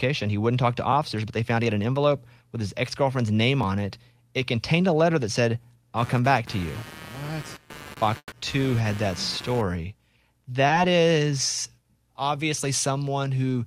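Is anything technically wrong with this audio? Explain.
Yes, there are four problems.

At 3.63 s, between "his ex girlfriend's name" and "on it", there's a block of digital silence. A gap of about 2 ms of zeros, likely from a buffer that wasn't filled in time, gives a sharp tick.

From 5.97 to 9.61 s, starting after "a letter that said", there's computer activity noise. Changing computer load is disturbing the audio ground, so you get a buzz pulsing at around 150 Hz, roughly 20 dB under the speech.

From 8.18 to 8.34 s there's a burst of packet loss. The receiver stretches the last sound for about 140 ms while fading it, drops to silence for about 60 ms, then jumps ahead with 140 ms gone.

From 10.68 to 10.72 s there's short concealed packet loss. About 20 ms of audio never arrived and got patched by extending what came before, which leaves a brief smear.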